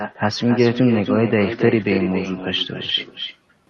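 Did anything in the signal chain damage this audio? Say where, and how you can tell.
Yes, in the call processing. This is echo with no canceller, and it runs through the whole clip. Every bit of speech comes back about a third of a second later as a quieter, thinner copy, sitting about 9 dB under the direct signal. The far end is playing the call out of a loudspeaker, its mic picks that up, and nothing strips it out before it crosses the Opus call path back to you.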